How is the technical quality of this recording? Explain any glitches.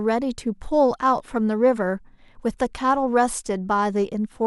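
No technical glitches can be heard in this speech recording. There is nothing here that calls for an explanation.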